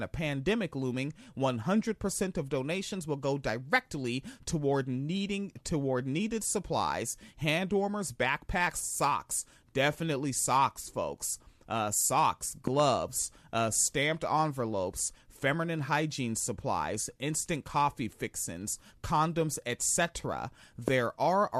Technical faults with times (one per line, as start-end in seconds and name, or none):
12.67-12.82 loud pop
20.88-20.90 loud pop